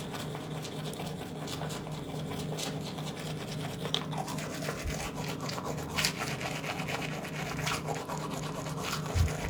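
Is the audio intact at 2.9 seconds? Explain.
Yes, at 2.9 s the audio is intact, with no dropout, click, distortion or other fault to be heard at that moment.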